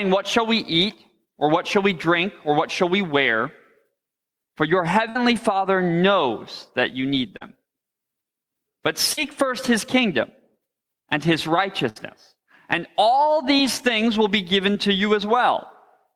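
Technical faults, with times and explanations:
5.09–5.17 s and 11.89–11.98 s, burst of packet loss: about 60 ms of audio fails to arrive each time, so the receiver extends the last sound for roughly 55 and 65 ms and fades it down. This gives a held, decaying tail before playback resumes with that stretch gone.
7.37–7.43 s, 9.13–9.19 s, 13.58–13.61 s and 14.73–14.77 s, short concealed packet loss: 20 to 40 ms of data goes missing at each point. The decoder fills the gap with an extrapolated copy of the preceding sound and crossfades back, which leaves a brief smear or wobble.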